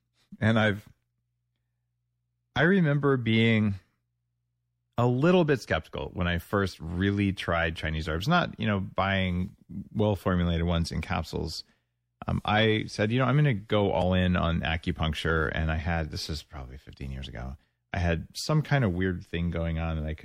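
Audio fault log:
Throughout, MP3 compression: likely a low-bitrate MP3 encode, fitting roughly 64 kbps, that starves the encoder of bits, so it drops weak frequency lines frame by frame. The speech sounds plainly watery and swirly, with chirpy sibilants and smeared onsets.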